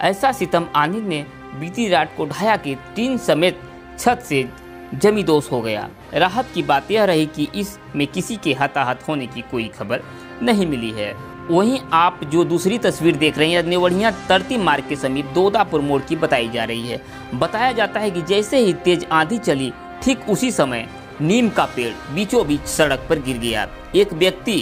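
Crude rate conversion from 21.49 s to the end: samples repeated without filtering, which fits a 44.1 kHz to 48 kHz change, add a gritty inharmonic fizz roughly 25 dB below the sound.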